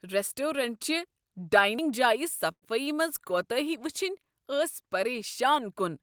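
At 2.51 s the sound stalls. The last moment is drawn out and fades into about 70 ms of silence, then resumes at 2.64 s exactly where it stopped, delayed 106 ms with nothing lost. This call audio freeze likely came from late packets draining the jitter buffer.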